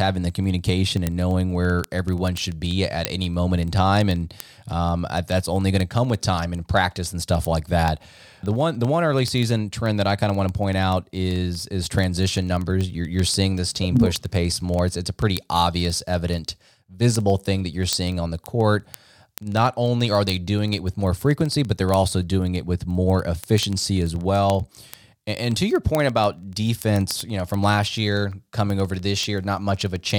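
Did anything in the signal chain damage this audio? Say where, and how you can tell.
Yes. Throughout the speech, from 0.10 s to 30.15 s, there is a steady train of sharp ticks of uneven strength, about twenty per second, hundreds in all. These are word clock ticks from a digital link whose receiving device runs on its own clock instead of locking to the sender's. The two clocks are far apart, roughly a few hundred parts per million. Each time they slip past each other, a single sample is dropped or repeated and the waveform jumps.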